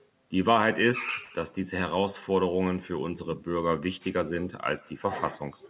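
Throughout the speech, echo with no canceller: the far end's loudspeaker feeds its microphone unchecked, so a faint, thin copy trails each phrase by roughly 150 ms, about 29 dB down. From 1.24 to 1.33 s, a short stall from a late packet: the jitter buffer ran dry, so the receiver stretched the last sound by 65 ms, briefly holding it with a slight buzz or dip before resuming, nothing lost.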